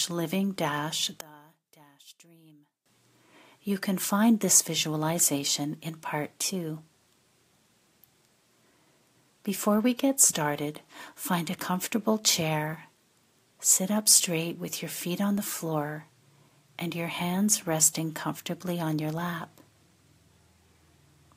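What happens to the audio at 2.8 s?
At 2.8 s the audio is still inside a stretch from 1.21 s to 2.86 s where it collapses, dropping by about 25 dB, and then returns to full level. The likely cause is one channel inverted: one side of a stereo source had its polarity flipped, so when the two sides were summed to mono, everything they shared cancelled. Only the small difference between them remains audible for that span.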